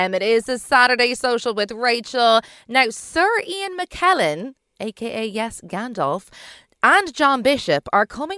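No technical faults heard.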